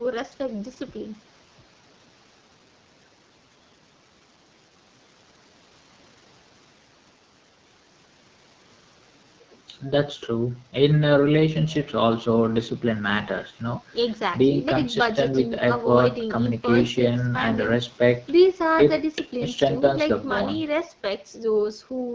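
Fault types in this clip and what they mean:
AMR wideband (HD Voice) codec: speech coded at a low rate, which fits 8.85 kbit/s, sounds rough and raspy throughout; spectrograms show smeared harmonics below 6.4 kHz and noise-like fill up to 7 kHz.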